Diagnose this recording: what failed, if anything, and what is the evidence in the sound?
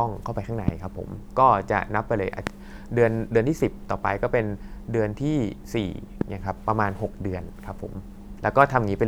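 Three loud pops land at 0.68, 2.47 and 6.21 s, each a single sharp pulse of about 20 ms peaking roughly 20 dB above the speech, which continues underneath. The likely cause is a voltage step from a loose plug or static in the analogue wiring.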